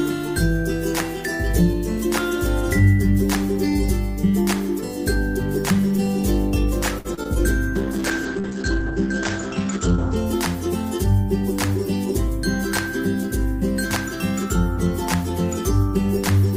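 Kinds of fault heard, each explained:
Short stall from a late packet: around 6.99 to 7.07 s a packet came late, so the last sound gets held about 57 ms, then carries on with nothing lost.
Short concealed packet loss: at 7.15 and 7.23 s small gaps were patched by extending the previous sound, leaving brief smears or wobbles where roughly 40 and 20 ms went missing.
Call bitrate drop: from about 7.77 to 10.22 s the encoder falls from 32 to 9 kbps and bandwidth narrows to 8 kHz, so the sound goes muffled and rough.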